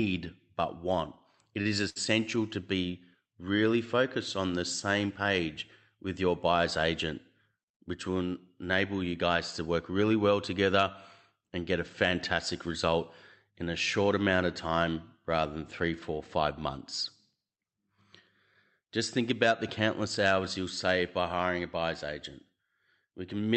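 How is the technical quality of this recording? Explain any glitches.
The speech comes through a call path with three glitches: two brief stalls early on and one stretch that runs slightly fast. The audio sounds band-limited at about 8 kHz, as an Opus call codec at a fairly generous rate, around 64 kbps, would produce.

At 1.61–1.67 s and again at 1.89–1.98 s, just before "to be really focused", there are short stalls from a late packet. The jitter buffer ran dry, so the receiver held the last sound for 40 ms and then 64 ms until the data arrived. You hear a sustained, faintly buzzy sound, not a gap. Unlike a lost packet, nothing is skipped, and the speech picks up exactly where it left off.

From 7.55 to 8.23 s, between "with your buyer's agent" and "enable you guys to", there is a jitter buffer speed-up. The buffer had built up extra delay, so the receiver trimmed pitch-period-sized pieces, about 70 ms in all, and played the audio at roughly 108% speed. 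The phrase sounds hurried, but the pitch stays the same, which separates this from simple resampling.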